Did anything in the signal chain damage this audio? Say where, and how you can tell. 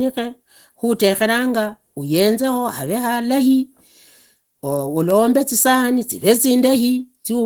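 Yes, at the codec: Opus voice compression throughout. The speech sounds hoarse and a bit robotic, yet reaches 20.1 kHz, which fits hybrid mode starved near 16 kbps.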